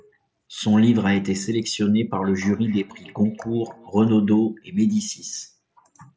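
Speech recorded through a headset path with nothing above 8 kHz and a light grain on louder sounds, consistent with the wideband mSBC Bluetooth codec. From 2.12 to 3.95 s there is feedback echo between two devices: the speech comes back at a regular interval of roughly 300 ms, peaking at about 26 dB below the direct voice. A second device in the room is playing this call and the microphone picks it up again, so the local echo canceller, which only handles its own playback, lets it through.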